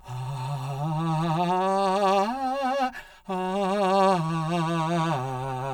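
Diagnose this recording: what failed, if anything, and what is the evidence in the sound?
The music has a channel delay (comb filtering) running the whole way through. It sounds hollow and phasey, with a dip down around 100 Hz and further notches evenly spaced about every 200 Hz above it. That spacing fits one channel arriving roughly 5 ms late, which points to a driver or buffer stage, before the two channels got summed to mono. Anything common to both sides cancels at those fixed frequencies.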